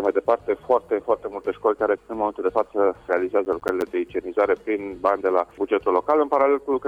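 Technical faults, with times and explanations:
3.45–3.82 s, processor overload crackle: the audio breaks into a short burst of gritty crackle. The processor fell behind and missed several buffer deadlines in a row, around seven, and each miss left a hole of silence with hard edges on both sides. The gaps are short, which fits a buffer of roughly 10 ms, and their rapid succession turns into tearing that stops once the load clears.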